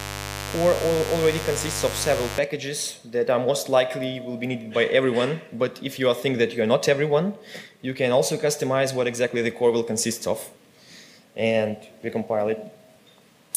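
Mains buzz is loud in the audio from the start to 2.38 s: 50 Hz switching spikes give a raspy edge, unlike a pure low hum.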